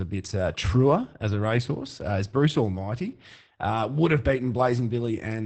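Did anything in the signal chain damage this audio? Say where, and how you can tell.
Yes, at the codec stage: Opus voice compression runs throughout the speech, with nothing above 8.6 kHz and a plainly hoarse, slightly robotic texture. A plain low-pass filter would only muffle. This coarse excitation coding, from SILK in wideband mode, points to around 12 kbps.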